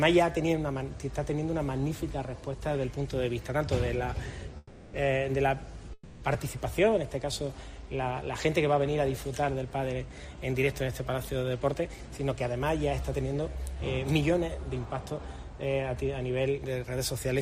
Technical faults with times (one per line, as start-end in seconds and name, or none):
4.57-4.95 call audio freeze
5.93-6.23 call audio freeze
11.36-14.38 jitter buffer speed-up
14.79-15.29 jitter buffer speed-up
16.58-17.25 jitter buffer speed-up